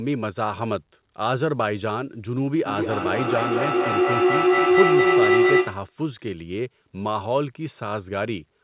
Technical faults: feedback howl

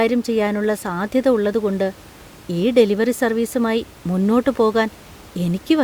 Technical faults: none

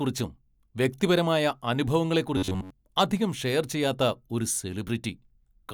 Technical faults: robotic sound from repeated short buffers

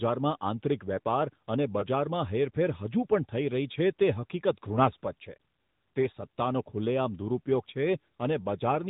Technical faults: AMR narrowband mobile codec; lost AMR speech frames

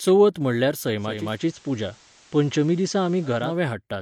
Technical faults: digital radio blending to analogue

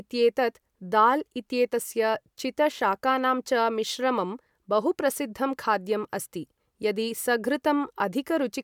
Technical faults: none

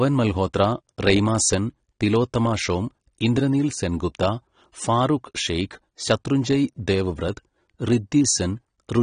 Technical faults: AAC compression

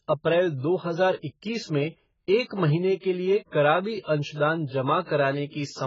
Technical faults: AAC compression

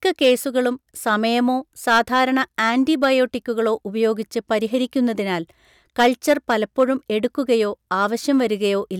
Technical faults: hard clipping

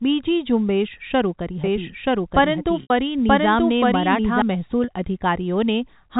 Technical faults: doubled audio track; packet loss with pitch repetition

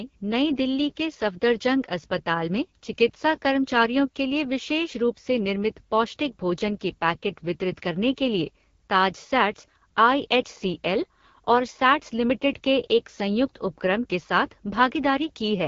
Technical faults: AMR wideband (HD Voice) codec

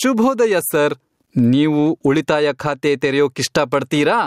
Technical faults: gain pumping

